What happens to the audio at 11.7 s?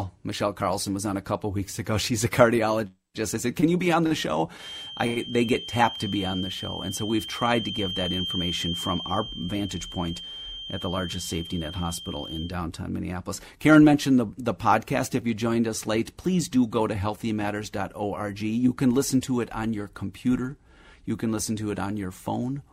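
The loudspeaker-to-microphone loop is likely sitting right at the edge of feedback, causing a feedback whistle from 4.55 s, just after "be on the show", to 12.56 s, so 11.7 s falls near its end. The loop gain is high enough to keep a single 3.2 kHz tone going but not high enough to let it build. The result is a thin, steady whistle behind the speech, about 10 dB below it, swelling and fading slowly in level.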